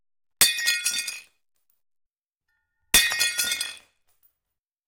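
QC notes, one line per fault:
0.11–4.79 s, periodic USB or driver dropouts: a regular tick repeats every 0.246 s, about twenty in all, each a tiny gap where a few milliseconds of audio are skipped rather than filled with silence. Something on the USB bus or in the audio driver is stalling the stream at a fixed interval, so the waveform jumps abruptly at each loss. Those steps are heard as evenly spaced clicks that sound only while there is signal.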